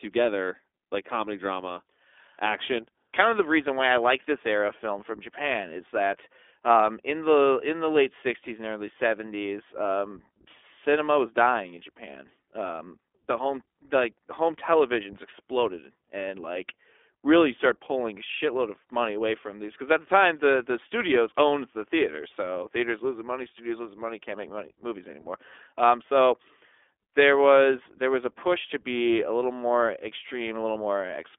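Throughout the speech, the iLBC codec shapes the sound. Nothing passes above about 3.7 kHz, and the line band runs from 300 Hz to 3.5 kHz, so the voice sounds thin and boxed in. The codec damage is plainly audible. Each short frame is coded on its own, with no help from the frame before. That leaves a rough, slightly synthetic texture. The roughness fits 20 ms frames at a 15.2 kbps mode.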